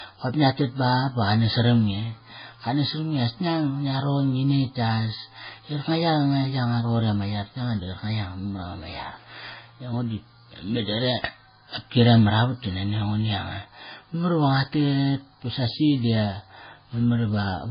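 Throughout the speech, the audio was likely transcoded between lossy codecs, a very low-rate MP3-style encode re-coded by Vorbis. The second encoder wastes bits on the first one's smearing and adds its own swirling artefacts, and nothing survives above 5 kHz, leaving the voice dull and watery.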